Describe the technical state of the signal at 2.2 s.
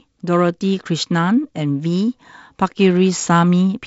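At 2.2 s the speech is intact, with no fault present, only the light upper-band hiss and slightly noisier lower band of G.722 wideband telephone coding at 48 kbit/s.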